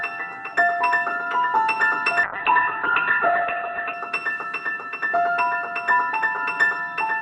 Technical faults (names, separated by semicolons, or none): call bitrate drop